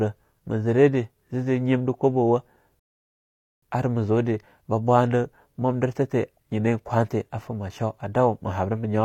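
At 2.80 s the speech cuts to silence for about 0.83 s, a rebuffering stall: the player exhausted its downloaded audio and waited for more data. Playback resumes at 3.63 s exactly where it stopped, on "ar ma zude ba", so nothing is skipped, only 0.83 s of time is added.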